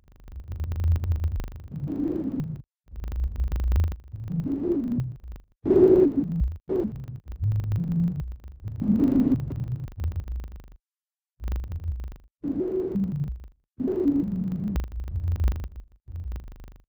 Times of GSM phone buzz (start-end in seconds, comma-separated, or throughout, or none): none